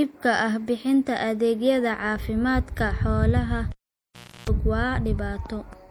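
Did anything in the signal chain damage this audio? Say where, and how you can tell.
Yes, two things. The first is at the codec stage, across the whole clip. The speech has that plainly audible watery, swirly quality, with chirpy, metallic edges on the s sounds and softened attacks. That's likely MP3 compression, and it fits a low bitrate around 64 kbps. When the encoder runs short of bits, it cuts the treble and keeps dropping weak frequency lines in and out from frame to frame, which is where the swirl comes from.

The second is in the analogue wiring, a cable pulled and plugged in. Right after "bixinta adeegyada caafimaadka xoolaha" there's a pop at 3.72 s, then the signal drops to near silence for about 0.73 s, up to 4.49 s. During that gap you get roughly 0.32 s of 60 Hz mains buzz, which is the plug tip touching before it seats. A second pop marks the sound coming back.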